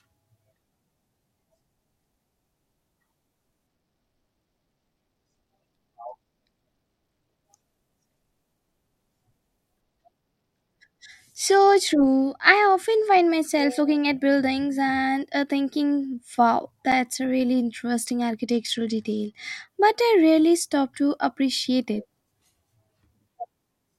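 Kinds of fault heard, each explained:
Bluetooth SBC bit pool drop: the speech dulls three times, from 3.67 to 7.45 s, from 9.81 to 13.31 s, and from 18.45 to 19.67 s, as the link encoder cuts its bit allocation to hold the stream together, which fits a fall from a bit pool of about 28 to 13, near 102 kbps. Starved of bits, the upper sub-bands lose their detail and the remaining bands are quantised coarsely, so treble fades and a gritty grain sits on the voice until quality returns.
Block of digital silence: at 16.92 s the signal drops to silence for about 8.7 ms and then resumes, with no fade in or out. Because the waveform jumps to nothing and back abruptly, each edge produces a sharp discontinuity, and at this length the whole event is heard as a single tick or brief pop rather than a noticeable gap, consistent with an output buffer that went unfilled in time.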